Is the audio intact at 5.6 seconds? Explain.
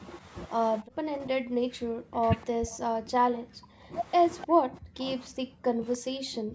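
No, at 5.6 s the speech sits inside a stretch from 4.45 s to the end where it's pushed way down, at times by something like 40 dB. That's speech suppressed in double talk, likely the echo canceller ducking the talker while the far side spoke.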